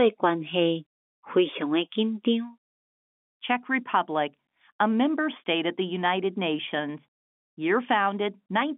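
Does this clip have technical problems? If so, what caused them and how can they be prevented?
No, the speech sits in an ordinary telephone band of about 200 Hz to 3.5 kHz, consistent with G.711 mu-law telephone coding, and there is nothing to prevent.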